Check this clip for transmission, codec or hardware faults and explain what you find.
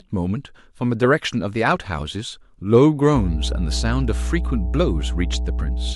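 One hardware fault is present: mains hum from 3.13 s to the end of the clip. A ground loop or a nearby transformer is coupling the 60 Hz power line into the signal path, so the supply frequency rides along with the audio. It sounds like a steady low drone at 60 Hz with some low harmonics above it, sitting under the speech at roughly the same loudness for the rest of the recording.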